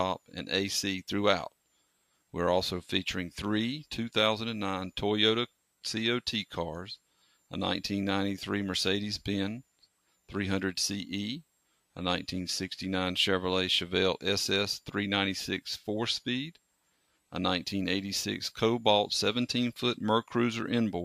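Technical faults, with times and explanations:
7.11–7.37 s, sound cut by the noise suppressor: the suppressor mistook this sound for noise and pulled it down by up to about 11 dB, so it briefly sinks.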